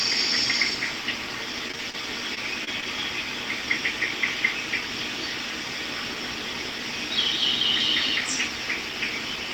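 From 1.68 to 2.84 s, repeated packet loss (robotic sound) occurs: data keeps arriving lost or late, and each hole is bridged by extending the preceding sound. Six short dropouts, the longest about 23 ms, leave this stretch choppy, with small pieces missing.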